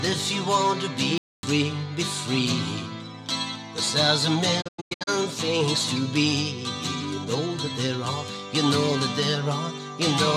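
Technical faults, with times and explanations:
1.18–1.43 s, playback stall: the sound stops mid-flow and falls silent for about a quarter of a second (253 ms), then carries on. This likely comes from the player running short of buffered data or its output thread being briefly blocked.
4.60–5.09 s, digital broadcast dropout: the receiver mutes in several short holes spread over 448 ms, each entered with a quick 20 ms fade. In total 320 ms of programme is lost, the longest single gap being 96 ms. That pattern fits ten corrupted or missing frames. The audio resumes later in the programme rather than where it stopped.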